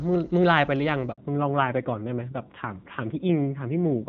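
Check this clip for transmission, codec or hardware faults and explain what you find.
Two faults are audible: a brief handover gap, then a fallback to narrowband for the rest of the clip.

Handover gap, 1.12 to 1.18 s: the call switched networks and no speech frames arrived for 60 ms. The speech dies away and resumes afterward. The waveform shows a flat stretch, and the spectrogram a thin vertical blank band across all frequencies.

Fallback to narrowband, 1.18 s to the end: the link dropped from HD Voice wideband coding, which sounds clean before the gap, to an older narrowband codec. Nothing above 4 kHz remains, so the speech turns duller and rougher, pointing to a low narrowband rate. On the spectrogram the upper band is abruptly empty above a sharp 4 kHz ceiling.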